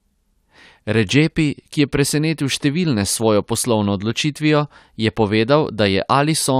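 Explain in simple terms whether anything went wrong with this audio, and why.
Nothing went wrong with this speech recording; no technical faults can be heard anywhere in it. The sound stays steady throughout, with no dropouts, clicks or sudden changes to point to.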